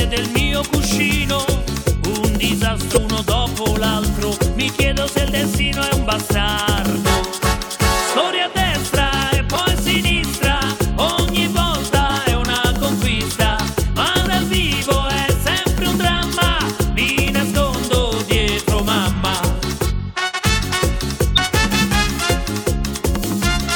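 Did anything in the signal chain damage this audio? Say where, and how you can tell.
Yes, at the codec stage. There are compressed frames skipped at 2.91–2.98 s, 9.56 s, 12.09 s, 20.31–20.40 s and 21.35–21.39 s. At each point the audio jumps forward, losing roughly 100 ms, 20 ms, 50 ms, 100 ms and 50 ms of material. Whole frames were never decoded, either missing from the stream or rejected as corrupt.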